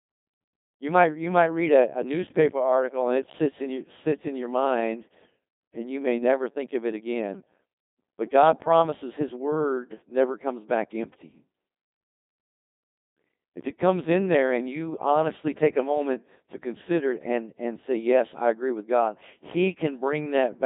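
Throughout, the speech has passed through a Codec 2 vocoder, which rebuilds it from pitch, voicing and spectral envelope, so it sounds robotic and buzzy. A spectrogram shows tidy, synthetic harmonic stripes and nothing above 3.8 kHz. The heavy damage fits a 2.4 kbit/s mode.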